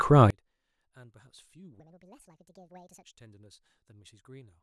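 From 0.30 s to the end, the speech falls by about 35 dB in mono, leaving only a faint residue. This is one channel inverted, likely: the centred voice cancels against its reversed twin, unlike a simple level drop, which would keep the full tone.

Between 1.80 and 3.04 s, the speech runs 1.63 times too fast and rises by roughly ten semitones. This is a section at the wrong speed, likely from a clock mismatch. Pitch and pace jump together, which sets it apart from a pitch shift that leaves timing intact.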